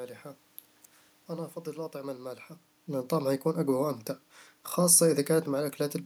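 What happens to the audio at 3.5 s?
Nothing goes wrong at 3.5 s: the speech continues intact through that moment, with only the background noise of the room beneath it.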